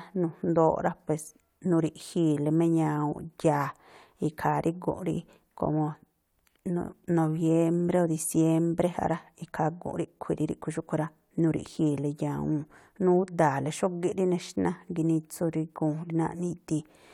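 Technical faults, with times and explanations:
No technical faults detected.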